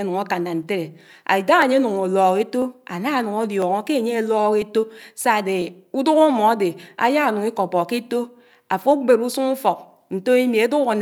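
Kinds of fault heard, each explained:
Periodic USB or driver dropouts: a background process stalls the audio path once a second from about 0.63 s to 5.6 s, and each time a fraction of a millisecond of speech is skipped rather than silenced. The result is a regular train of ticks, heard only where speech is present.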